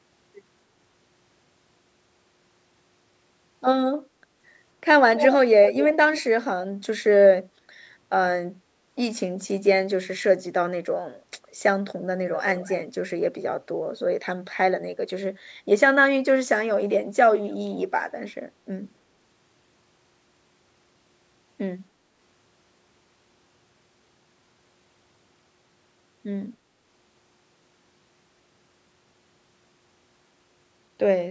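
Speech with two brief bursts of echo leak: at 5.15 to 5.28 s a delayed copy about 256 ms behind, nearly as loud as the voice, and at 12.57 to 12.76 s a faint copy about 242 ms late, likely a far-end loudspeaker echo canceller letting residue through. On a spectrogram each shows as a weaker, shifted repeat of the preceding harmonic pattern, which stops below the 8 kHz ceiling of the call band. On a waveform each is a trailing envelope.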